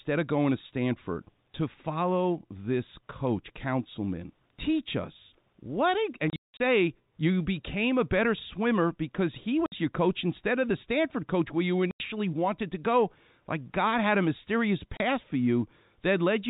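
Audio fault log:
6.30–6.59 s, 9.66–9.72 s, 11.91–12.00 s, 14.97–15.00 s, packet loss filled with silence: the speech drops to dead silence with hard edges, after "us what" (holes over 300 ms, longest 180 ms), after "coach where you", and after "had a mysterious". Gaps of 30, 60 and 90 ms fit 30 ms packets that never arrived and were replaced by silence, all within the 4 kHz telephone band.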